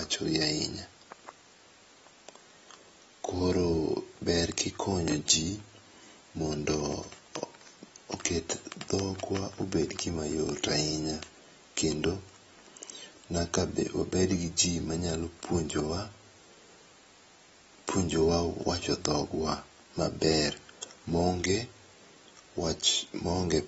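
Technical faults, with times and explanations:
Throughout, AAC compression: the speech is plainly damaged, with nothing at all above about 7.7 kHz, so consonants lose their air and the whole thing sounds dull. Sibilants and held vowels take on a fizzy, warbly texture. That points to a low bitrate, something like 24 kbps. The likely cause is AAC-LC, which drops its cut-off and starves or fakes high bands with substitute noise when it's short of bits.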